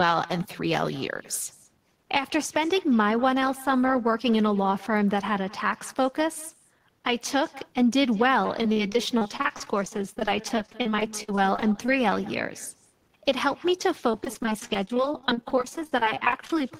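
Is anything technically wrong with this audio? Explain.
Yes, two faults are present in this speech clip.

Echo with no canceller, throughout: the far end's loudspeaker feeds its microphone, and nothing subtracts that pickup, so every phrase returns about a fifth of a second later, roughly 21 dB down, as a faint, thin shadow.

Repeated packet loss (robotic sound), from 8.62 to 11.89 s and from 14.12 to 16.61 s: many short gaps, up to 48 ms and 22 ms long, are patched by stretching the preceding sound, covering about 19% and 25% of those spans, so the speech turns choppy with pieces missing.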